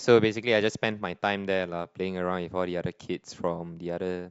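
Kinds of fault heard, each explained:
Nothing here to flag, since no faults turn up anywhere in this bit of speech.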